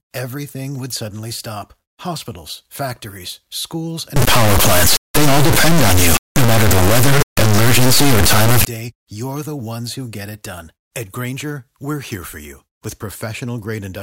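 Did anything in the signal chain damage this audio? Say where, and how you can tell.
Yes. Right after "factories schools", from 4.16 to 8.65 s, there's a harsh clipped square-wave buzz: integer read as float at sample-format conversion, which fits 32-bit integers decoded as floats.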